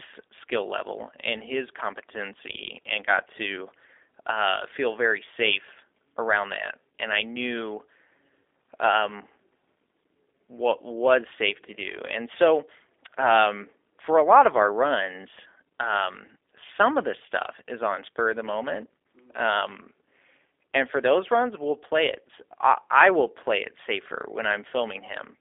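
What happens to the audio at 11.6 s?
At 11.6 s, as throughout, G.729 codec damage: 8 kbit/s pulse-modelled speech sounds rough and synthetic, and the spectrogram shows a hard ceiling near 3.7 kHz.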